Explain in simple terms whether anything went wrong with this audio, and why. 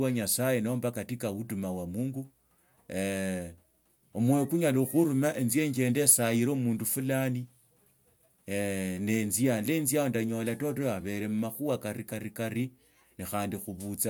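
Nothing went wrong here: the speech comes through without any dropouts, glitches or distortions you'd need to worry about.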